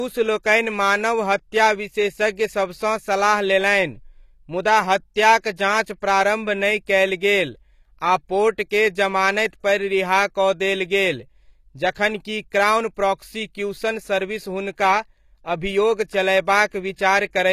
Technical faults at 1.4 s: low-bitrate audio saved at a high bitrate

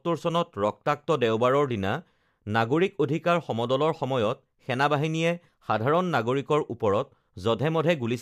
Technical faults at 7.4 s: none

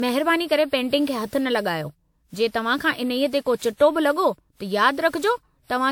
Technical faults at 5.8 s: generation loss

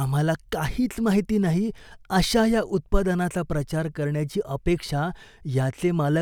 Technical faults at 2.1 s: none

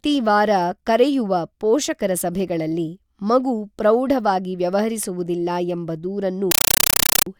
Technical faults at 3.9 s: none

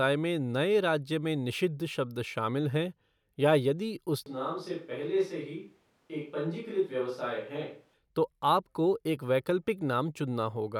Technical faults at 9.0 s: none

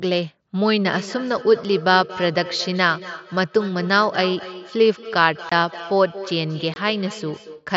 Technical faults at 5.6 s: feedback echo between two devices; unconcealed Bluetooth headset packet loss

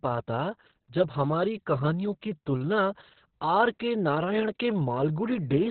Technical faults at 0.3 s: Opus voice compression

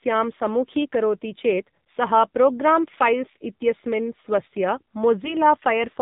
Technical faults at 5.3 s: AMR narrowband mobile codec; AMR bit errors

